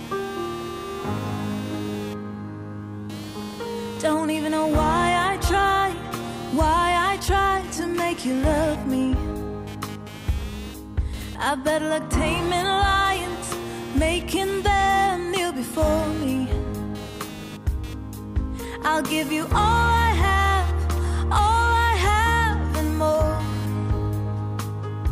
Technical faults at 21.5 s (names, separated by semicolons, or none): computer activity noise